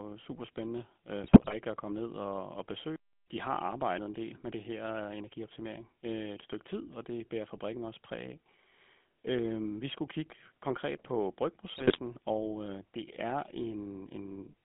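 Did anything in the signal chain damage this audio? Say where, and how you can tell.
Yes. At the codec stage, GSM full-rate coding runs throughout, giving a buzzy, gravelly roughness and a 200 Hz to 3.4 kHz band, which fits 13 kbps pulse-excited coding.

On the network link, GSM bit errors at 1.24–1.54 s and 11.74–11.97 s corrupt filter, pitch and gain values, so the speech squawks, pops and gargles.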